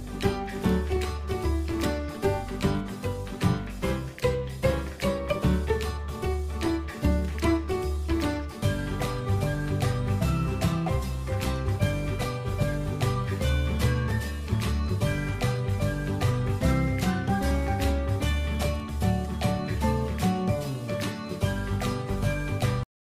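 The audio has a cut-off end: at 22.83 s it stops in the middle of a sound and drops straight to digital silence, with no decay or tail, for the remaining third of a second. The final buffers were evidently never written or played out. On a waveform the signal ends abruptly mid-sound, followed by a flat line. A spectrogram shows energy ending along a sharp vertical edge, with nothing after it.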